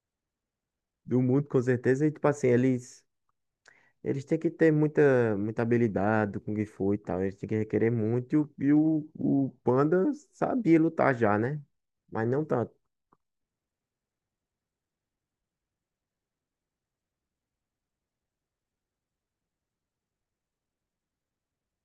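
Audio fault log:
8.43–10.40 s, drift correction step: the speech abruptly slows by 5.3% and drops 94 cents, nearly a semitone, then snaps back to its original speed and pitch. The cause is likely clock-matching software stepping the playback rate to rebalance its buffer.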